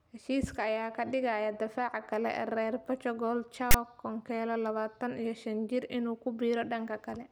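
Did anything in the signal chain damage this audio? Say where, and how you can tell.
Yes. At 3.71 to 3.74 s a brief, hard-edged rasp interrupts the speech: file tags played as audio. Text metadata stored in the file is being decoded as samples at playback. The waveform shows a dense block sitting off-centre from zero, and the spectrogram shows a broadband vertical stripe.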